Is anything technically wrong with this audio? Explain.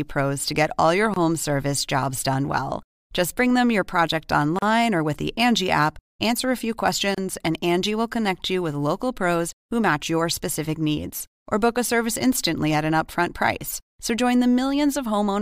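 Yes. Gaps at joins of encoded pieces occur at 1.14–1.16 s (25 ms), 4.59–4.62 s (36 ms) and 7.15–7.18 s (31 ms). Separately encoded segments were spliced untrimmed, so encoder start delay and end padding leave brief silences with smeared edges before the speech resumes where it stopped.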